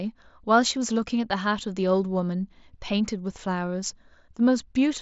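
Speech over a Bluetooth mSBC link; no faults heard.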